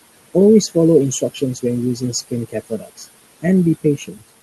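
Noise suppressor artifacts run through the whole clip. The suppressor pulls down whatever it judges to be steady noise by about 19 dB, frame by frame, so the room noise, sitting about 16 dB below the speech, dips in the gaps and swells under the speech.

Speech cut by the noise suppressor occurs at 1.21–1.64 s, 1.96–2.33 s, 2.49–3.07 s and 3.84–4.30 s. The suppressor mistakes quieter parts of the speech for noise and turns them down, by about 12 dB in the first stretch and about 18 to 19 dB in the others. Each affects only a short portion, roughly a tenth to a few tenths of a second, and those portions sound swallowed or faint.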